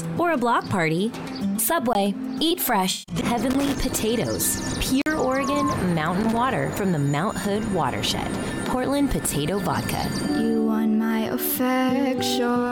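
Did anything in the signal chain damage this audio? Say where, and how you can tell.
Yes. At 1.93 s there is a short hole of about 20 ms, and from 5.02 to 5.06 s another short hole opens. These are blocks of digital silence from the driver or buffer stage: samples were likely zeroed when the output buffer wasn't filled in time. The 46 ms gap fits a 2048-sample block.

From 2.91 to 3.16 s the sound turns smeared and phasey, with about 192 ms of material missing across roughly 213 ms and the longest stretch around 150 ms. This is AAC frame loss with concealment at the codec or network stage. The decoder rebuilt the missing frames from the last good spectrum.

Irregular bursts of scratchy crackle run from 3.51 to 3.75 s and from 6.21 to 6.37 s. This is loose connector crackle in the analogue wiring. A worn or dirty contact kept making and breaking, which chopped the signal into rapid, uneven fragments.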